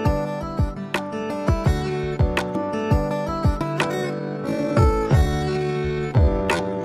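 From 3.85 s to the end, the sound abruptly slows to about half pace while its pitch stays unchanged, so it drags. This is a time-stretched section, likely from software lengthening the audio by repeating short overlapping pieces.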